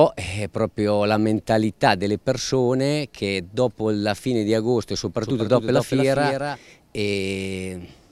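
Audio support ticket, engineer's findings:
Doubled audio track, 5.23 to 6.57 s: full-band copy trailing by roughly 200 ms, about 5 dB down, starting and stopping abruptly. Likely a second, slower capture path mixed back in. Unlike echo or reverb, single repeat, no decay, no room colour.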